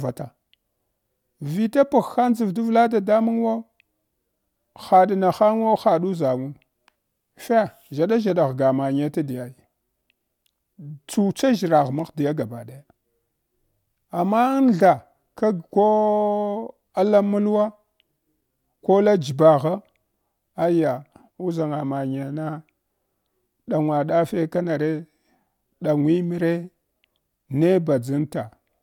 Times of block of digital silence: none

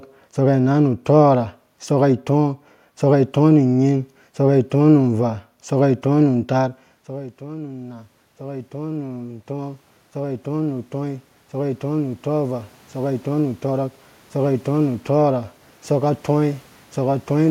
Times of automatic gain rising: 6.56-16.26

